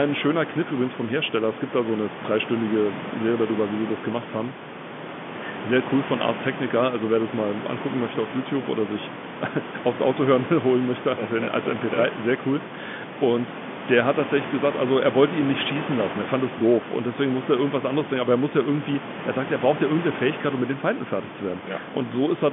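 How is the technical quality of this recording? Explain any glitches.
No glitches or technical faults are audible here.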